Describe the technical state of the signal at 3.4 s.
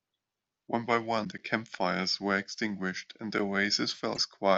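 A gap between chunks occurs at 3.39 s, at the join before the next 2-second chunk, leaving a 7 ms hole of silence in the speech.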